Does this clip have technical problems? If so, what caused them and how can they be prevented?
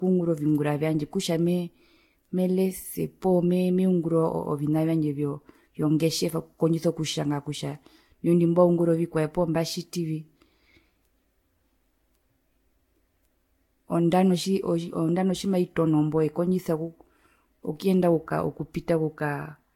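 Yes. The speech sounds swirly and hollow throughout, with blurred attacks. That's likely generation loss from about four Vorbis re-encodes around 65 kbit/s. Keep a lossless master and encode only once.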